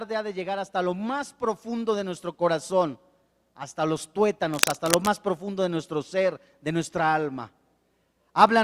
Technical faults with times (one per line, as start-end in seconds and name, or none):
4.54-5.14 cable scratch noise